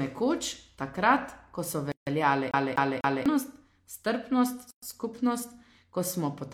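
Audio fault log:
1.92–2.07 s and 4.71–4.82 s: gap at a join of encoded pieces. Right after "nekoč takrat ko so" the speech drops out for about 150 ms, then about 120 ms later on. Separately encoded chunks were butted together with encoder delay and end padding left in.
2.51–3.26 s: CD stuck on one turn. Just after "takrat ko so veljale" a 248 ms slice plays three times with a brief mute at each jump, like a laser knocked back a track.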